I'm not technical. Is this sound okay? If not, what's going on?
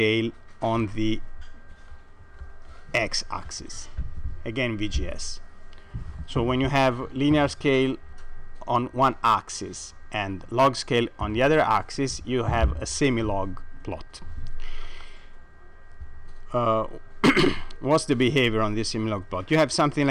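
No. All the way through, the loudest moments crackle and sound rough and fuzzy at the edges. That's hard clipping: the sound was pushed louder than the equipment could handle, so its loudest peaks got chopped flat, adding harsh, gritty distortion on those brief peaks.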